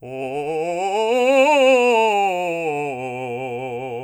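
No technical faults are audible anywhere in the music.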